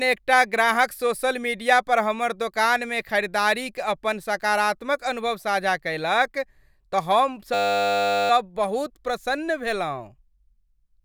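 From 7.54 to 8.3 s, a system hang loop occurs. The computer or driver stalled while the audio hardware kept replaying the same small ring buffer, so one 10 ms slice of the speech repeats exactly, over and over, which points to a buffer about 10 ms long. Because the loop is so short, it comes out as a steady, flat buzz at 100 Hz. Normal sound resumes with "बहुत प्रसन्न", with little or no audio missing.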